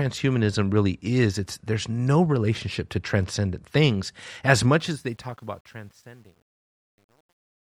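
From 4.80 s to the end at 7.78 s, the volume stage handling the fade-out keeps too few bits and applies no dither, which fits a path holding only 10 bits, causing truncation distortion on a fade. As the gain drops from roughly 5 s, the speech waveform collapses onto a handful of coarse steps. From 5.44 s to 7.78 s the quiet tail turns gritty rather than thinning away cleanly.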